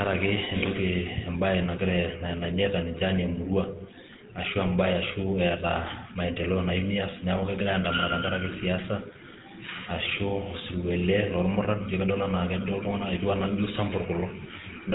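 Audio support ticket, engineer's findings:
Buzzy, gravelly speech roughness throughout, nothing above 4 kHz. GSM full-rate codec damage, plainly audible: pulse-driven vocal-tract model, sparse excitation. Fits 13 kbps full-rate encoding.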